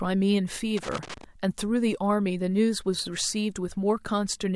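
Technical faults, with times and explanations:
0.77 to 1.24 s, loose connector crackle: for roughly half a second the speech breaks into an irregular burst of scratching and crackle. A worn or dirty contact in the signal path is shifting, so the circuit closes and opens many times in quick succession. Each break chops the audio into fragments, and each reconnection produces a sharp edge that the ear hears as a click or pop.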